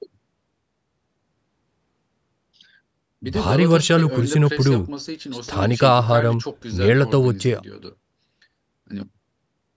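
No technical faults are audible.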